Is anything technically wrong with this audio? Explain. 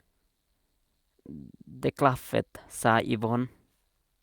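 No, nothing technically wrong turns up here; it's just speech coming through as it should, with no faults to point to.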